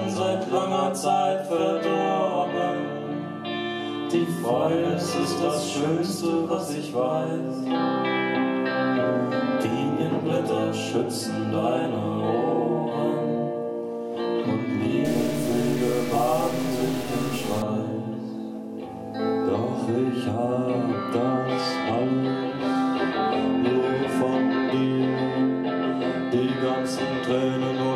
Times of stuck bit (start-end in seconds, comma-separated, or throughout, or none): 15.05-17.62